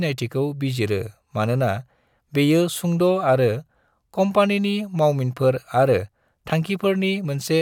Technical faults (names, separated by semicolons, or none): loud pop